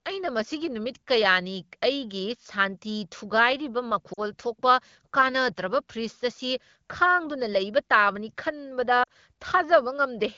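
Lost AMR speech frames occur at 4.13–4.21 s and again at 9.03–9.08 s, each a 40 ms gap that fits two dropped frames. Radio errors caused those frames to fail their checksum, so the wideband decoder, whose light coding texture fits 12.65 kbit/s, filled each gap by repeating the last good pitch and vocal tract settings at falling gain. Each event is heard as the speech dropping to near silence within the two frames, with the voice briefly weak or rough as it recovers.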